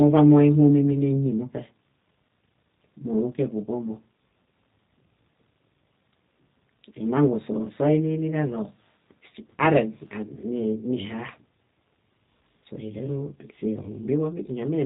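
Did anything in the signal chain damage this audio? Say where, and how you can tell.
Yes. The G.729 codec stage damaged the whole clip, which is speech. From start to finish nothing passes above 4 kHz, and the voice has a rough, synthetic edge that fits the low 8 kbit/s rate. The codec rebuilds each 10 ms frame from a vocal tract filter, a pitch predictor and a few excitation pulses, so fine detail is lost. A plain narrowband filter would only dull the sound, but this model-based coding also leaves a buzzy, artificial texture.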